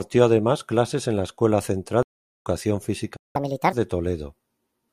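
Stream reconnect at 2.03 to 2.47 s in this speech recording: the connection dropped, leaving about 411 ms of silence, and a fresh decoder picked up mid-stream, so the speech resumes roughly 0.3 s further on than where it broke off. Playback stall at 3.16 to 3.36 s: the sound cuts out for 183 ms mid-flow, most likely because the player's buffer ran dry or its thread was blocked, and output stayed silent until it recovered. Catch-up at higher speed from 3.36 to 3.73 s: to recover the time lost in that stall, the player resamples its backlog at 1.5 times normal speed, raising the pitch by around seven semitones before dropping back to normal rate.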